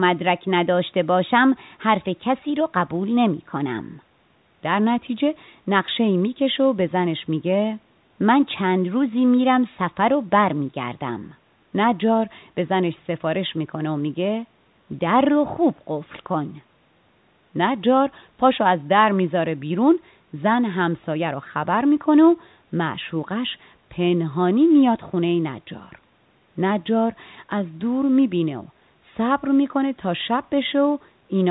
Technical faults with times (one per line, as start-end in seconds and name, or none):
none